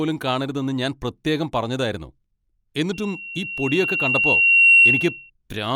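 Loudspeaker feedback squeal runs from 2.93 to 5.30 s. A microphone is picking up the loudspeaker it drives, and at 2.7 kHz the loop gain exceeds unity. A single piercing tone swells over about two seconds to about 15 dB above the speech.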